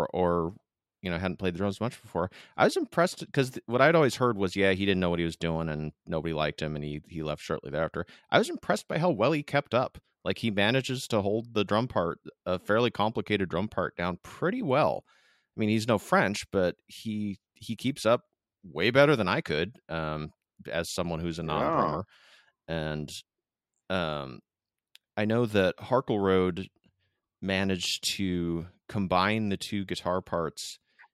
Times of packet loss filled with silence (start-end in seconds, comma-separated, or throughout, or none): none